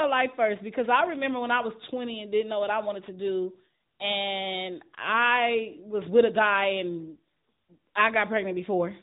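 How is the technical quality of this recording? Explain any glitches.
Quality is poor throughout, with AMR narrowband mobile codec damage for the whole clip. The speech is cut off above about 3.8 kHz, and a vocal-tract model rebuilds the voice as buzzy, synthetic speech, fitting a roughly 10.2 kbps mode. That synthetic texture is what sets it apart from simple low-pass filtering.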